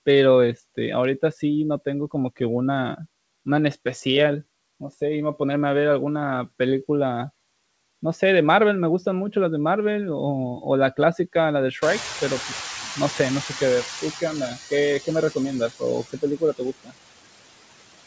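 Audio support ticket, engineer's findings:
Noise suppressor artifacts, whole clip: background pulled down about 19 dB between phrases, swelling back under the speech. Frame-by-frame band gating on a noisy input, so the leftover noise pumps with the talker. Top end stops at 8 kHz, which fits the G.722 wideband call path rather than the suppressor.

Noise suppressor catching up, 11.81 to 14.25 s: room noise jumps about 21 dB around 12 s and comes through only about 9 dB reduced at first. It then sinks over roughly 2.4 s as the suppressor's noise estimate re-learns the new floor. Classic lag after a sudden level change, not a stuck suppressor.

Speech cut by the noise suppressor, 16.1 to 16.95 s: about 400 ms in total of speech dips, by up to about 21 dB at the deepest. The affected speech comes out swallowed or faint. With the room noise now only about 12 dB under the speech, the suppressor misreads quiet speech as noise and ducks it along with the background.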